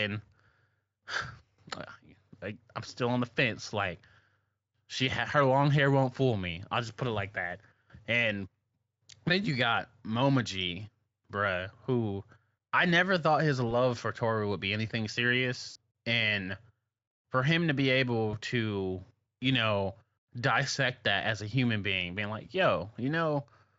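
Just after "I never thought his", at 13.69 s, the sound smears briefly into a buzzy, fading tone. A longer smear of about 60 ms follows at 15.69 to 15.77 s, and another at 18.31 to 18.37 s between "for him to be" and "to you know dissect". These are VoIP packet loss concealed by the speech codec. The Speex decoder stretched its last pitch and filter over the gaps, fitting one 20 ms frame, then three, then one.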